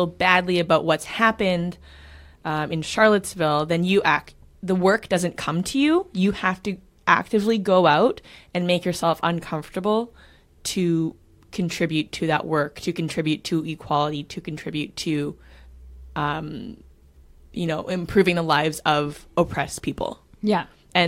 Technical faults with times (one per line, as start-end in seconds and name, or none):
none